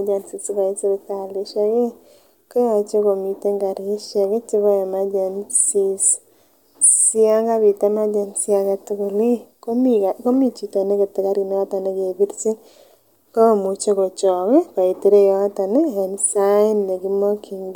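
No technical faults are audible.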